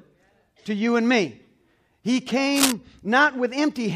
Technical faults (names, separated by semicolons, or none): cable scratch noise